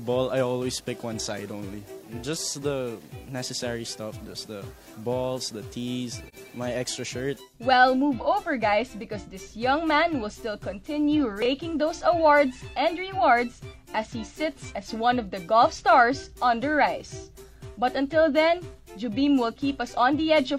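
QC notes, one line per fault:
6.28–6.35 s, AAC frame loss with muting: the sound briefly drops away into a short, soft-edged gap of roughly 43 ms, fading down and back up. The hole's length fits a single lost AAC frame. The decoder replaced the missing frame's spectrum with silence, and because AAC builds its output from overlapping windows, the neighbouring frames taper into and out of that silence, which softens the edges of the dropout.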